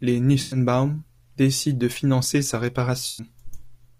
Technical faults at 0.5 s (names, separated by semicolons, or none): AAC frame loss with concealment